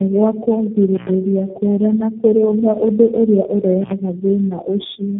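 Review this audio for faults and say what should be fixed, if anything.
Tandem speech coding throughout: the speech sounds rough, muffled and warbly, with nothing above 3.8 kHz, which points to several low-rate coders in a row, such as G.729A. Preventing it means carrying the speech end to end in one codec, or passing frames through transcoder-free.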